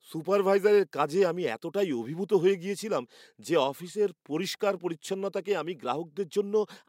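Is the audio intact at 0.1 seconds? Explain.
Yes, the audio is intact at 0.1 s, with no fault present at that moment.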